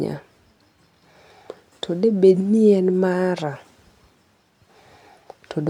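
No dropouts, clicks, distortion or timing breaks can be heard anywhere in the recording.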